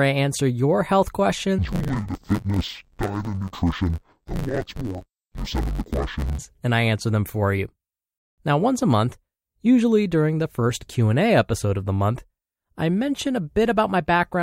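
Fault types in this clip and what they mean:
Interleaved audio read as planar: from 1.59 to 6.39 s the speech turns dull and robotic, with a buzz at about 92 Hz and no clear drop in pitch. Each 10.88 ms block of alternating left and right samples is split in two, with the first half sent left and the second half sent right. Each half plays stretched across the whole block, and the short block length makes the fault a steady buzz rather than an octave shift.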